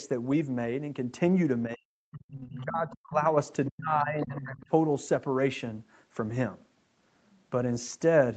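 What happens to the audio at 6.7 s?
Nothing goes wrong at 6.7 s: the speech there carries through intact, with no dropout, glitch or other fault at that moment.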